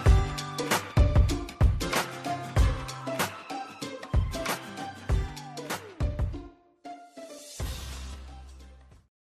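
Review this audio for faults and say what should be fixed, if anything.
A clock drift buffer slip is the likely cause, with two devices' clocks roughly 500 ppm apart forcing about 30 samples to be dropped or repeated. This gives a regular click every 1.37 s from 0.63 s to 8.48 s. Locking both devices to one clock, or resampling between them, prevents it.

Damaged data in the compressed stream made the decoder lose frame sync, giving brief glitches at 0.91 s, 5.27 s and 8.13 to 8.15 s. Checksummed, reliable transport of the encoded stream prevents it.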